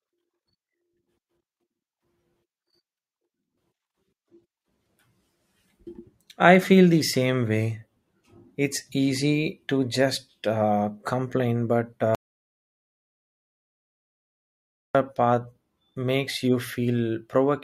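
At 12.15 s an audio dropout to silence cuts the speech for 2.8 s, likely from lost input, until "path makes you" at 14.95 s; waveform and spectrogram show flat, empty silence.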